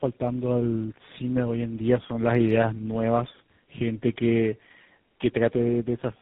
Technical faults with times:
0.00-6.22 tandem speech coding

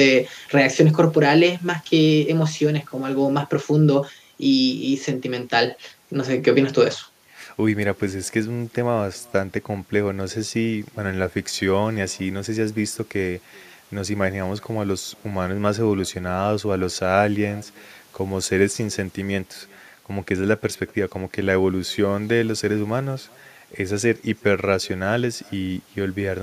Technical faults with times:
0.00-26.43 echo with no canceller

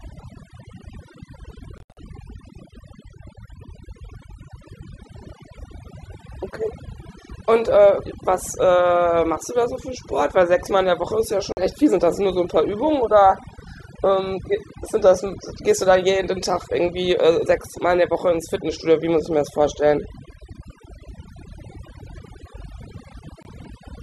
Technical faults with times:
0.00-24.03 overdone noise removal
1.78-1.98 digital broadcast dropout
11.52-11.58 digital broadcast dropout
23.43-23.46 digital broadcast dropout

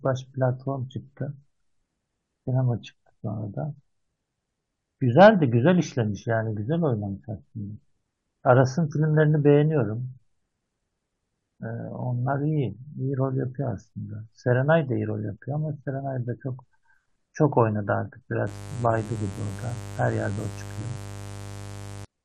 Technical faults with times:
5.19-5.28 hard clipping
18.47-22.05 mains buzz

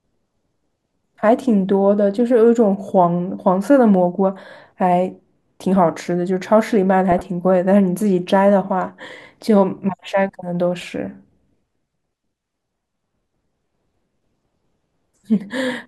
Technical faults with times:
2.89 corrupt frame decoded
7.12-7.21 corrupt frame decoded
9.78 corrupt frame decoded
10.81-10.83 corrupt frame decoded
15.15-15.22 corrupt frame decoded

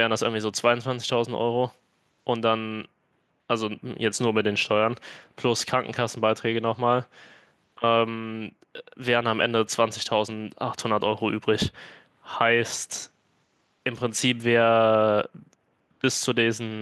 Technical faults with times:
none

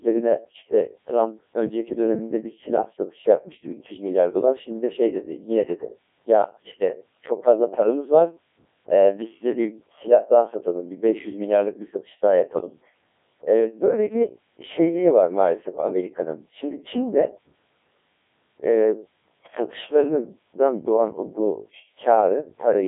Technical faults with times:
0.00-22.88 Codec 2 vocoder

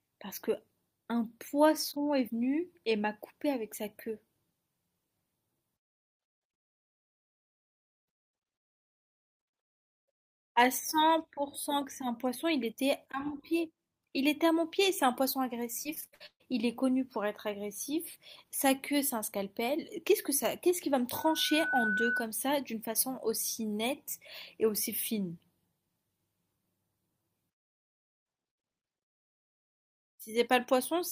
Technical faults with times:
15.83-16.42 repeated packet loss (robotic sound)
21.14-22.29 loudspeaker feedback squeal

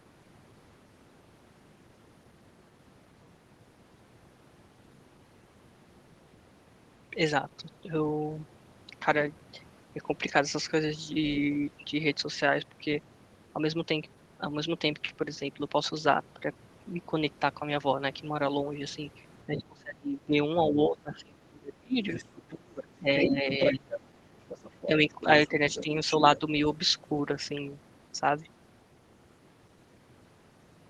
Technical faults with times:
19.46-20.35 speech suppressed in double talk
20.70-21.97 speech suppressed in double talk
22.12-22.84 other side's voice leaking through
22.99-24.27 speech suppressed in double talk
23.22-23.76 other side's voice leaking through
24.48-26.39 other side's voice leaking through
24.86-25.90 speech suppressed in double talk
26.21-26.43 speech suppressed in double talk

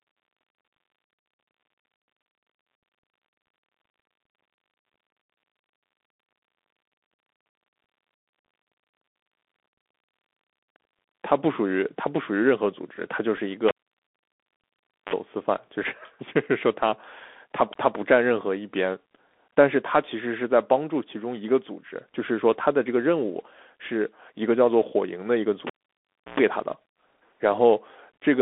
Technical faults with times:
0.00-28.41 Bluetooth CVSD headset codec
13.37 Bluetooth headset packet repeated
15.83 Bluetooth headset packet repeated
25.67-26.40 cable pulled and plugged in

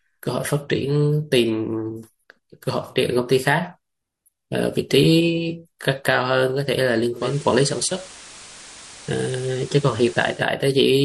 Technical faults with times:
7.12-10.49 digital radio blending to analogue

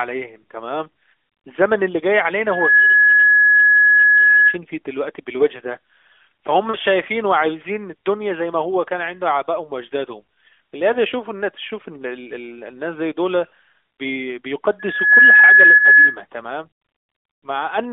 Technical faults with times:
2.49-4.58 loudspeaker feedback squeal
6.70-6.76 lost AMR speech frames
13.48-13.52 lost AMR speech frames
14.79-16.18 loudspeaker feedback squeal
15.78-15.81 lost AMR speech frames

